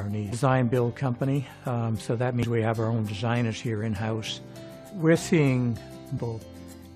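The audio carries three short glitches at 0.31 s, 2.43 to 2.45 s and 6.17 to 6.19 s, each about 20 ms long, the signature of damaged data in a compressed stream. Corrupted bytes make the decoder misread those frames and lose sync until it finds the next valid header. A spectrogram would show each one as a thin vertical break in the surrounding content, and the waveform as a brief disturbance breaking the surrounding envelope.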